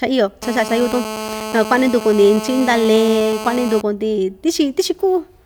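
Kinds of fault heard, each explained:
GSM phone buzz: a nearby 2G handset on a call transmits in pulses about 217 times a second, and the audio circuitry rectifies them into a hard, raspy buzz rich in harmonics, about 10 dB below the speech, steady from 0.43 s to 3.81 s. Unlike mains hum, it sits at 217 Hz rather than 50 or 60 Hz and sounds harsh, not smooth.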